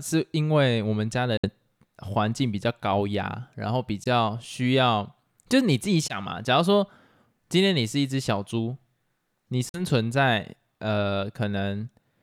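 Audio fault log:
1.37–1.47 s, 4.04–4.07 s, 6.08–6.17 s, 9.69–9.81 s: Bluetooth dropout. The speech cuts abruptly to silence, then resumes further along as though it kept playing. Late wireless packets were likely dropped before reaching the headphones.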